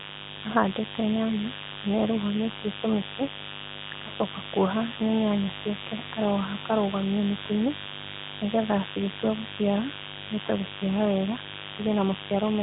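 Mains buzz runs through the whole clip, a steady, raspy drone sitting not far below the speech. Sharp switching spikes at twice each 50 Hz cycle leaked into the signal path, stacking harmonics into the kilohertz range, though the narrowband mobile channel cuts everything above 3.8 kHz.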